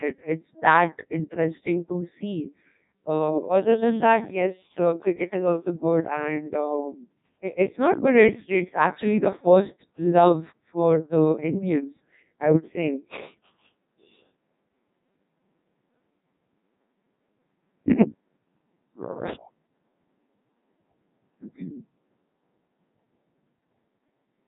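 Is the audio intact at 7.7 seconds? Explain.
No. At 7.7 seconds, as throughout, the speech sounds robotic and buzzy with nothing above 3.8 kHz. This is the Codec 2 vocoder rebuilding speech from sine waves, with damage this heavy pointing to a very low bitrate near 1.2 kbit/s.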